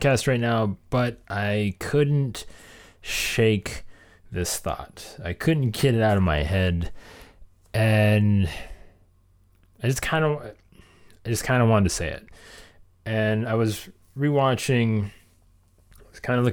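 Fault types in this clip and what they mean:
No faults detected in this speech recording.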